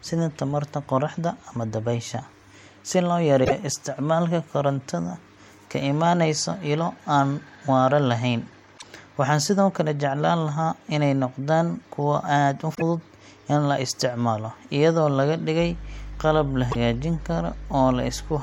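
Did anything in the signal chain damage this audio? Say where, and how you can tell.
Yes. Damaged data in the compressed stream produces short glitches at 3.41–3.52 s (after "dabaysha si loo"), 8.74–8.84 s (after "waara lahayn"), 12.74–12.82 s and 16.68–16.76 s. The decoder misreads corrupted frames and resyncs at the next header, leaving each blip.

Mains hum enters at the analogue wiring stage from 15.58 s to the end, just after "la isticmaalo iyadoo laga". A steady 50 Hz tone with low harmonics sits roughly 15 dB below the speech, the signature of a ground loop or nearby transformer coupling into the line.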